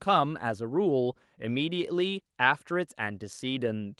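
No technical faults can be heard in the speech. Nothing in the audio points to a problem at any moment.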